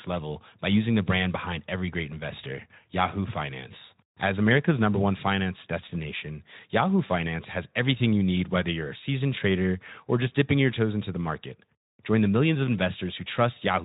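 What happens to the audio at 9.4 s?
Nothing goes wrong at 9.4 s; the speech carries on intact through that moment.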